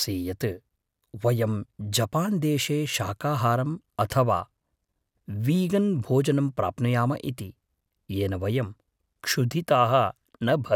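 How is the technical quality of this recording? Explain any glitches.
No technical faults can be heard anywhere in the recording. There are no glitches to explain.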